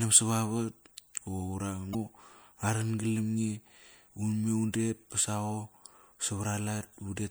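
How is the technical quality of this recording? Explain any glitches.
There is one glitch. At 1.91 to 1.95 s, damaged data in the compressed stream makes the decoder lose sync. A brief audible glitch results.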